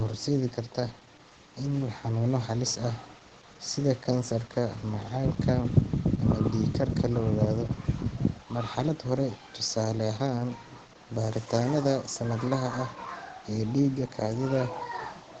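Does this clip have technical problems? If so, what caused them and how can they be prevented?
Yes. Opus voice compression runs throughout: nothing sounds above 9 kHz, and the speech is hoarse and slightly robotic from coarsely coded excitation, which fits SILK mode near 12 kbps. That grain separates it from a plain low-pass filter. Prevent it by encoding at a higher bitrate.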